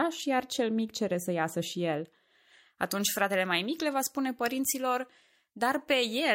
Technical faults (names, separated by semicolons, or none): pre-emphasis left on